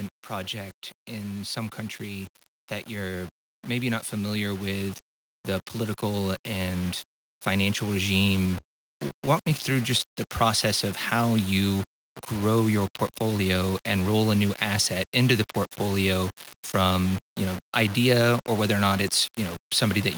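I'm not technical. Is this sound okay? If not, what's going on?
No, there are a few problems, some running the whole way through and some at specific moments.

Throughout the clip the speech has a rough, grainy edge that shifts with the voice and gets worse in the quieter bits, where sounds turn sandy or crackly. That's most likely low bit depth without dither: the audio was stored with very few steps between quiet and loud, which fits something like 5-bit audio, and each value was simply rounded to the nearest step. The rounding error tracks the voice instead of sitting underneath it as steady hiss.

From about 2.96 to 5.04 seconds there's automatic gain rising. The volume control built into the recording or calling setup decided things were too quiet and turned itself up over roughly two seconds. It's a modest lift, but the voice and whatever is behind it get louder together, in a slow swell rather than a jump.

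Between about 8.51 and 10.19 seconds you'll hear repeated stalls, a stutter. The audio was arriving late in bits, so the player kept running out and had to stretch the last bit of sound to cover, about a dozen times, the longest hold lasting around 75 milliseconds. Nothing actually goes missing, but that stretch drags and hiccups.

Later, from about 13.22 to 13.97 seconds, there's a jitter buffer speed-up. The player had built up too much waiting audio, so it trimmed out tiny slivers, roughly a tenth of a second in total, to catch up. The speech there runs about 10% fast without getting higher in pitch, so it sounds briefly hurried.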